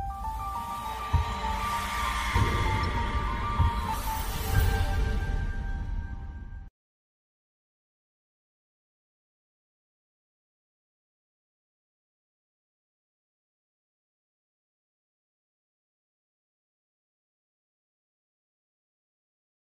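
Throughout, the sound has a watery, swirling quality from weak frequency components flickering between frames, likely MP3 compression at a rate consistent with 64 kbps. At 2.83 s, a corrupt frame decoded produces a brief glitch of misplaced energy at about -30 dBFS, which fits a single damaged frame.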